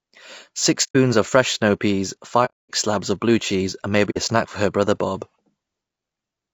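Low-delay AAC compression runs through the whole speech clip: the voice sounds rough and grainy, with noise filling the gaps between harmonics and a thin, synthetic-sounding top band. This is likely AAC-ELD, whose short frames resolve pitch poorly, at a bitrate that fits roughly 32 kbps.

Sample clock jitter is also present throughout: a hiss and roughness rides on the louder and brighter parts of the voice and disappears in the pauses. It fits a converter clock wavering by a microsecond or two, leaving an error about 35 dB below the signal.

AAC frame loss with muting opens soft-edged holes at 0.83 to 0.96 s, 2.45 to 2.71 s and 4.10 to 4.18 s. The sound fades out and back in, because the decoder zeroed the missing frames and the overlapping windows smoothed the edges. The gaps fit about four, eight and two lost frames.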